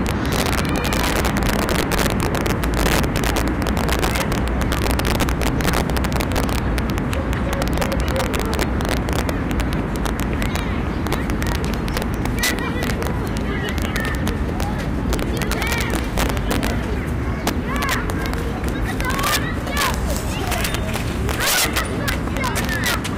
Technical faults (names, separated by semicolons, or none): integer overflow